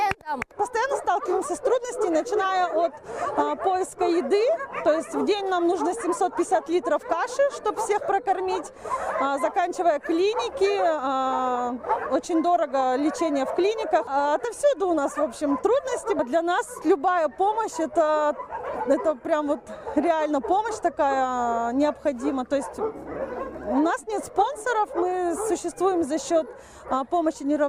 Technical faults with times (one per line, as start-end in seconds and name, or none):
none